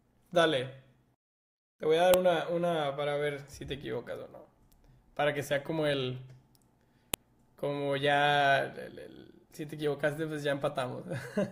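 Sharp, loud clicks snap through the speech at 2.14 s and 7.14 s, exactly 5 s apart, regardless of the sound around them. This is a file header played as audio: 5-second WAV pieces were joined without stripping headers, so their bytes play as samples.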